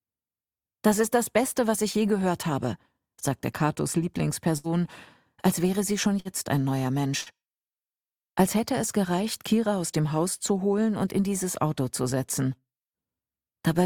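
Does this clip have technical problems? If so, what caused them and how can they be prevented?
Yes: bursts of packet loss at 4.57–4.67 s, 6.20–6.28 s and 7.21–7.29 s. Concealment briefly stretches then fades the last sound, and about 60 ms of audio is skipped. A larger jitter buffer and forward error correction would prevent this.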